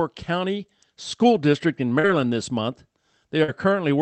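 At 1.99 to 2.06 s and again at 3.43 to 3.51 s, short concealed packet loss smears the speech. About 40 ms went missing each time, and the receiver extended the preceding sound before blending back. The brief wobble, rather than silence or a click, separates concealment from a plain dropout.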